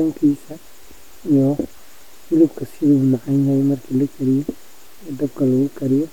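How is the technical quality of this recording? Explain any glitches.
No technical glitches can be heard anywhere in the speech. There is nothing in the recording that calls for an explanation.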